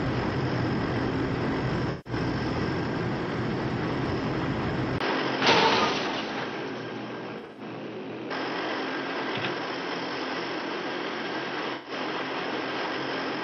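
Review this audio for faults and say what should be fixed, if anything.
AAC frame loss with concealment: smeared, noisy patches at 1.90–2.13 s, 7.38–7.61 s (broken into short gaps) and 11.74–11.92 s, where the decoder rebuilt missing frames from the last good spectrum. Prevent this with a more reliable transport or forward error correction.

Input switched to a poorer device: from 4.98 s, after a 20 ms silence, the sound turns dull, with nothing above 6.1 kHz and new background noise. The likely cause is a switch to a poorer input. Prevent this by locking the recording input so the system cannot change devices mid-session.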